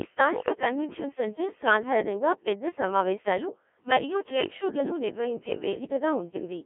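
Codec 2 vocoder coding runs throughout this speech clip, heavily. It is confined to 200 Hz–3.4 kHz, and its robotic, buzzy, sine-resynthesised voice points to a very low rate near 1.3 kbit/s.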